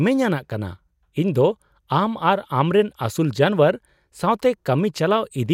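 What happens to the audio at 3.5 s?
Nothing goes wrong at 3.5 s; the speech plays through that moment intact, with no dropout, click or distortion.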